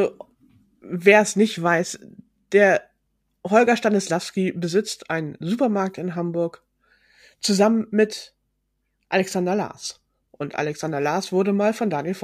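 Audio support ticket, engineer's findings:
Sample clock jitter, 1.58 to 5.15 s: hiss and roughness riding on the speech, worst on loud, bright passages. Unstable converter clock, around a microsecond of timing error, noise roughly 45 dB below signal.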